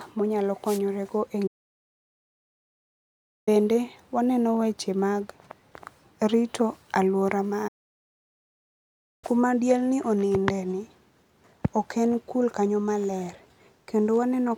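A speech recording with two kinds of fault. At 0.65 to 0.80 s the radio link of an analogue FM wireless microphone fades as reflected signals cancel, so receiver noise rises over the voice and comes through as a brief swish of static, a wireless microphone noise hit. Later the player most likely ran out of data or had its thread blocked, causing a playback stall. The speech cuts to silence mid-flow for 2.0 s from 1.47 to 3.49 s, and for about 1.55 s from 7.67 to 9.24 s, before it resumes.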